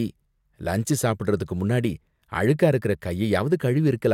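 Periodic clock jitter runs from 0.89 s to the end. Interference wobbles the converter's sampling clock at around 100 Hz, putting sidebands that far either side of every component of the speech, strongest at high frequencies. The result is a rough, metallic edge that disappears in pauses.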